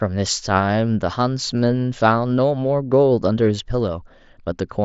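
A speech recording with nothing technically wrong with it, carried over a Bluetooth mSBC headset link that stops at about 7.7 kHz.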